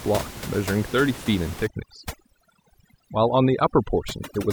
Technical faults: overdone noise removal

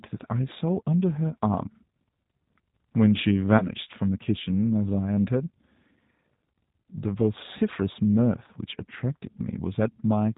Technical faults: G.729 codec; VoIP packet loss concealed by the speech codec

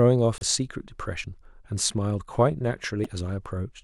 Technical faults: damaged data in a compressed stream

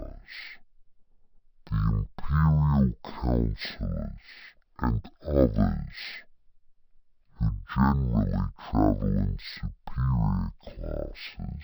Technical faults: stereo read as mono

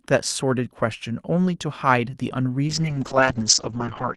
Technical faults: call bitrate drop

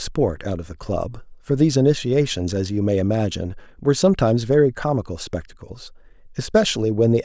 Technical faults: none

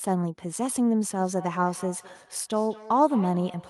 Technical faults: feedback echo between two devices

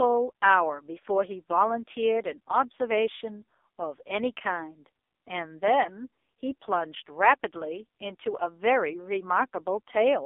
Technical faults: AMR narrowband mobile codec

